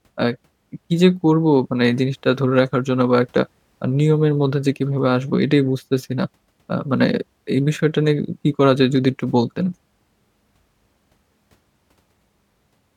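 No technical faults can be heard anywhere in this speech recording. Nothing stands out as a dropout, glitch or other break in the sound.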